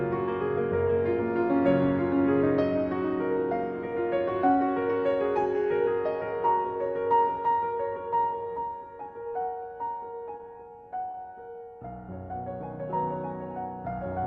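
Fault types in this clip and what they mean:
Short stall from a late packet: three times, at about 9.42, 10.37 and 11.11 s, a packet arrives late, the jitter buffer runs dry, and the last bit of sound gets held for 17 to 27 ms before picking up exactly where it stopped.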